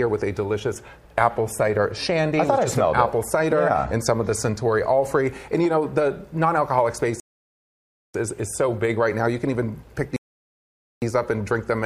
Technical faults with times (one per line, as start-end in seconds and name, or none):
7.20-8.14 rebuffering stall
10.16-11.02 rebuffering stall